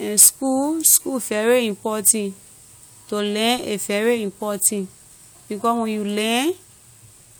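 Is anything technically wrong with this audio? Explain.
No, nothing technically wrong can be heard in this speech recording.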